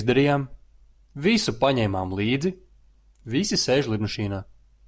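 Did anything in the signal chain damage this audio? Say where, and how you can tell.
No, nothing damaged this audio.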